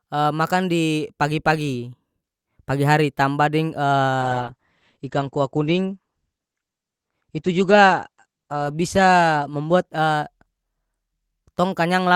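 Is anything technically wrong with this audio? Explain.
Yes. From 4.23 s to the end at 12.13 s, the speech turns rough and muffled, with the top end cut off at about 8 kHz instead of 20 kHz. This is a call bitrate drop: the encoder was starved of bits, consistent with a fall from around 64 kbps to 12 kbps, and the worst stretch lasts about 4 s.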